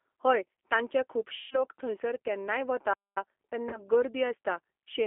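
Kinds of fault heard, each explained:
G.729 codec: The speech is rebuilt from a vocal tract filter, a pitch predictor and sparse pulses, which fits 8 kbit/s coding and leaves it plainly rough and synthetic throughout. A spectrogram shows energy confined to a 250 Hz to 3.4 kHz band, empty above and below.
VoIP packet loss concealed by the speech codec: About 150 ms goes missing from 1.36 s, which fits roughly five lost packets, and 30 ms goes missing from 3.69 s. The decoder stretches the last sound into a fading buzzy tone or coloured noise that stays weak until 1.61 s and 3.81 s. The waveform shows a smoothly decaying envelope, and the spectrogram shows smeared, repeated harmonics.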